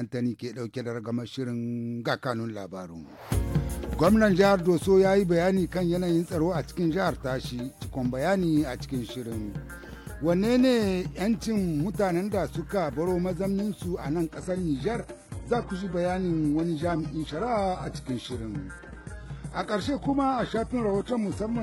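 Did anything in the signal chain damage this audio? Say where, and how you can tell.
Yes. At 14.3 s the network stream abruptly switched to an adaptive stream at a lower bitrate. A spectrogram shows content above 11.5 kHz vanishing with no gap in the waveform, which points to a low-rate codec such as HE-AAC.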